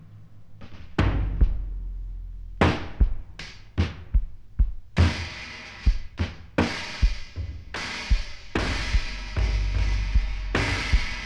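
No technical faults can be heard anywhere in the recording. Nothing in it breaks, drops out or gets interrupted at any point.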